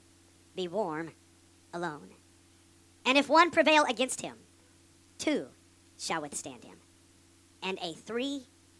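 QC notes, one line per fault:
Throughout: wrong sample rate. Everything runs 1.5 times too fast and sits about 7 semitones high, since speed and pitch rise together. That points to 16 kHz material played back at 24 kHz with no conversion, so it sounds rushed and chipmunky.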